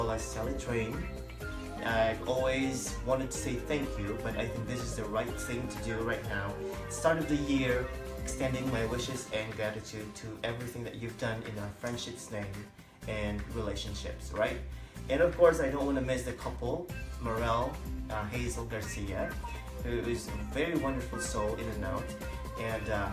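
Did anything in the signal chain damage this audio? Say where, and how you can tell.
No, nothing in the signal chain audibly damaged this audio, and its technical state gives no sign of trouble at any stage.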